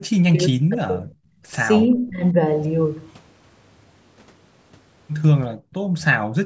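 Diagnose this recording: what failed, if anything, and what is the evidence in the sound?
Speech suppressed in double talk, at 0.0 to 1.04 s and again at 1.98 to 2.34 s. The speech sinks sharply, by around 40 dB at its deepest in the first stretch and around 25 dB in the second, then recovers. This is call processing on the echo canceller: most likely both ends were talking at once, so it could not tell the near talker from loudspeaker echo and attenuated everything it could not separate.

Background gated by the echo canceller, at 1.32 to 1.45 s and at 5.56 to 5.93 s. The room sound drops by about 20 dB in the first gap and about 37 dB in the second, then returns. This is call-processing suppression. The canceller clamps the microphone hard while the loudspeaker is active and releases it afterwards, so the ambient bed briefly vanishes instead of staying steady.

Echo leak, at 1.91 to 1.95 s. 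A faint, short scrap of delayed sound appears about 344 ms after its source, sitting roughly 40 dB under the speech, in audio band-limited to 8 kHz by the call's microphone chain. The stage is again call processing. The likely cause is a far end playing through a loudspeaker whose echo canceller left a residue of the returned signal, which travelled back down the call.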